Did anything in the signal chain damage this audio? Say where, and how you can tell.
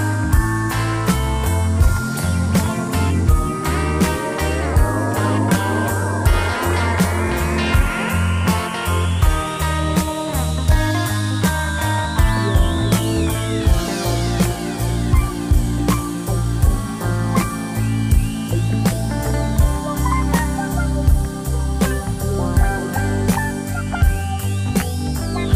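No, nothing along the way seems to have hurt this one; there's no point in the recording where any stage of the chain gives itself away.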